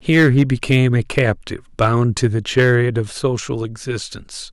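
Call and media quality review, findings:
Harsh fuzz on loud speech peaks, 0.09–1.30 s (about 5 dB over), brief crackle 1.81–1.87 s (about 2 dB), grit 2.24–2.75 s (about 3 dB). Hard clipping: gain stage or converter overdriven, peaks cut flat, adding high harmonics.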